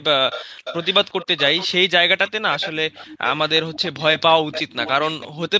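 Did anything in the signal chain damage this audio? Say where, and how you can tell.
Yes. There is an echo leak at the call-processing stage. A fainter copy of the speech trails it by 0.36 s at 0.31–0.46, 0.64–1.74, 2.26–2.31, 2.51–2.72, 2.92–3.39, 3.55–4.02 and 4.51–5.28 s, about 10 to 20 dB down. On a spectrogram, the harmonic patterns repeat, dimmer and shifted right. The likely cause is a loudspeaker echo canceller that let residue through.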